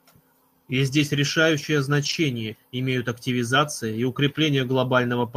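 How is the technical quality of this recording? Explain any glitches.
A short stretch of the speech turns rougher and noisier from 2.01 to 2.15 s, with no gap or dropout. It is a lost packet rebuilt from error correction: packets went missing in transmission, and the decoder filled in about 80 ms from the low-bitrate backup copies carried in the following packets, which fits four 20 ms packets. Because those copies are coded coarsely, the rebuilt frames sound grainier than the surrounding audio.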